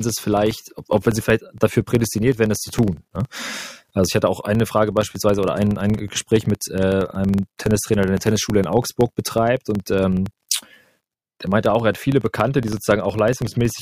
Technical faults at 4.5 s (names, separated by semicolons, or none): filter restarted on every block